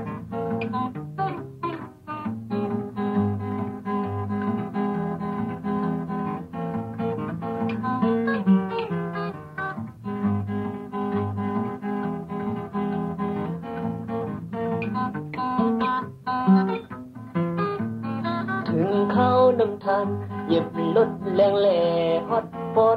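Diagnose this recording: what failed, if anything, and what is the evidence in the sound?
Nothing failed: listening across the whole recording turns up no audible evidence of trouble at any stage of the chain, from capture and conversion through transport and playback.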